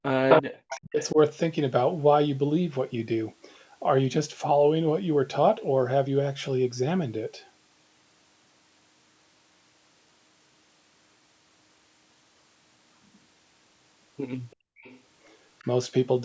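Speech suppressed in double talk runs from 0.0 to 1.18 s. The talker's speech dips by as much as about 40 dB over roughly a second, likely because the echo canceller, faced with both sides speaking, turned everything down.

Echo leak is heard at 0.29, 0.7, 1.0, 14.51, 14.82 and 15.59 s as a delayed copy of the speech 341 ms behind it. The first is about as loud as the speech, and the later ones are about 15 to 35 dB down. This is likely loudspeaker pickup that the canceller failed to remove.

Background gated by the echo canceller follows from 14.56 to 14.82 s. The room sound drops by about 37 dB for a quarter-second while the canceller clamps the microphone during loudspeaker playback, then returns when it releases.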